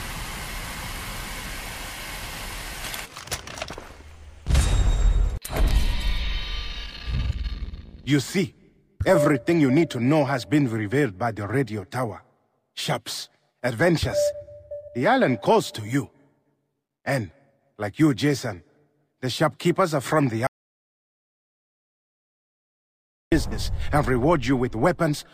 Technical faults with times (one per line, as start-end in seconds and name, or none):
20.47-23.32 audio dropout to silence